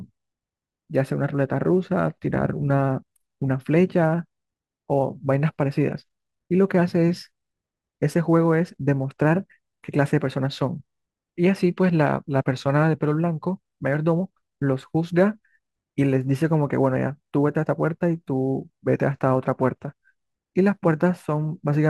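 Sample clock jitter runs through the whole clip. The converter's clock wanders by something like a few microseconds, so each sample is taken a little early or late, and the resulting amplitude error scales with how steeply the waveform is changing. The error sits around 40 dB below the speech, heard as a faint hiss or grain that thickens on loud, bright syllables and sibilants and drops away completely in the pauses.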